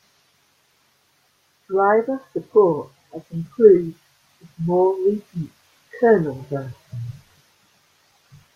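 A speech recording with no technical faults to report: the signal stays intact and continuous, with no disturbances anywhere in its run.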